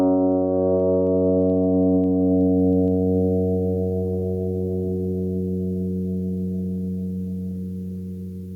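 It's a music clip with gain pumping all the way through, the level swinging about 15 dB. It's likely the gain was set far too hot with a fast limiter clamping down, leaving everything squashed.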